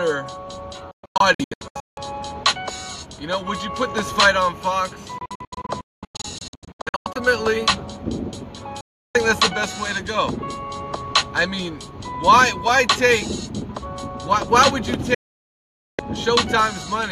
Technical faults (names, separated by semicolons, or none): digital broadcast dropout